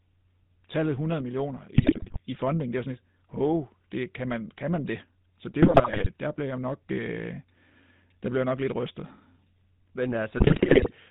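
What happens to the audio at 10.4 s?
At 10.4 s the speech is inside a burst of GSM bit errors that runs from 10.36 s to 10.91 s. Corrupted bits are reaching the decoder, at a rate of about 5%. When a bit flips in the filter coefficients, pitch lag or gain values, the frame is rebuilt with a warped spectrum or a sudden jump in level. The voice breaks into squawks, pops and gargling for just over half a second.

Underneath that burst, the whole clip carries GSM full-rate codec colouring, which fits a 13 kbps GSM full-rate link. The codec keeps a vocal-tract filter model and drives it with a regular pulse excitation that retains only one sample in three. Nothing above 4 kHz gets through. The plainly audible result is a buzzy, gravelly roughness on the voice, and the bit errors at 10.4 s sit on top of it.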